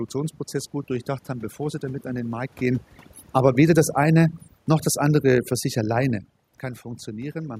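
Speech with a background pulled down and broken into twinkling specks throughout, the mark of overdone noise removal shaving quiet voice detail away with the room noise. From 2.64 to 6.34 s the level sinks gradually by about 5 dB, background included, as automatic gain falling reduces its gain. The talker also moves relative to the microphone around 2.5 s and 6 s.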